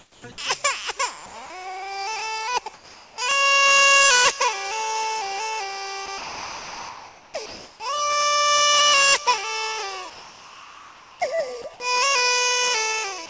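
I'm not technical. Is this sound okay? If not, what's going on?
No. During the quiet gaps at 0.00–0.24, 1.26–1.34, 2.74–3.18, 7.46–7.80 and 10.10–11.20 s, the real background turns into a flat, featureless hiss, mostly a little quieter. This is comfort noise in place of the background, likely from the call system pausing transmission and filling in artificial noise.

At 6.06 s, from 6.18 to 7.34 s, and at 11.62 s, bits of the actual sound vanish under that same steady hiss. This is sound dropped by the voice detector, likely because it mistook real sound for background and stopped sending. The call line itself carries nothing above 8 kHz.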